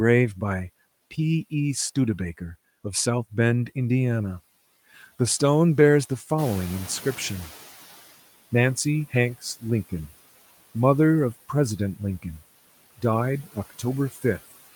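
Speech with the noise suppressor catching up from 6.38 to 8.01 s. The room noise jumps about 11 dB at around six and a half seconds. The suppressor's noise estimate lags, so the noise leaks through. Over 1.63 s it sinks by about 12 dB.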